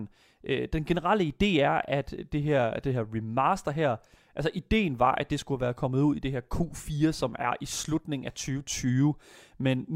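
Nothing in this recording stands out as a technical fault; the speech comes through steadily with no dropouts, glitches or other problems to point to.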